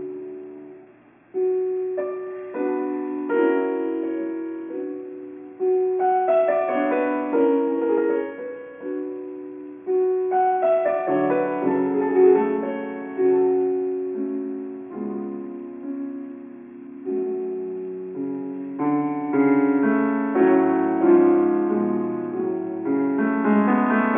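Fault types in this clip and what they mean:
Aliasing: Content above 3 kHz folds back as false, unrelated tones, which fits resampling to 6 kHz unfiltered. The grit sits about 30 dB below the signal throughout.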